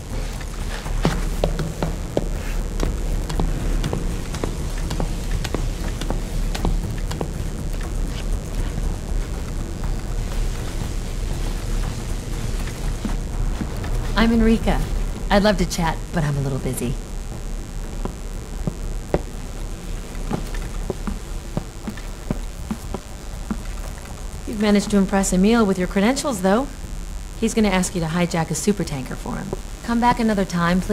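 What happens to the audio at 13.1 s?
At 13.1 s a mains buzz sits under the sound, as it does from start to finish rather than just at that moment. Sharp switching spikes, twice per 50 Hz cycle, leak into the signal and fill it with harmonics reaching several kHz, giving a steady, raspy edge about 20 dB below the main signal. A plain mains hum would be a smooth, low tone; the bright, gritty upper harmonics mark this as buzz.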